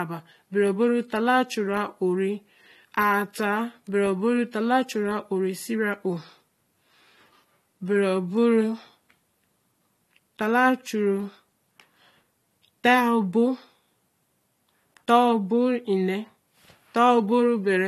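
Speech throughout, with nothing above about 13.8 kHz and the smeared texture of heavy compression, even though the file is MP3 at a high bitrate. The likely cause is low-bitrate audio saved at a high bitrate, which fits AAC near 48 kbit/s re-encoded at 320 kbit/s.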